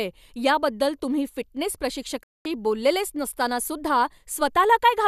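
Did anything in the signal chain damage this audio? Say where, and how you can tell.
Yes, there's a digital broadcast dropout at the reception and decoding stage. The speech goes silent from 2.23 s to 2.46 s, right after "याबद्दल तुम्ही फिटनेस", then picks up later with that stretch simply gone. That gap of about 0.22 s fits roughly nine lost frames: the receiver stopped getting clean frames, or they failed their checksum, so it muted rather than decode garbage and came back once good frames arrived.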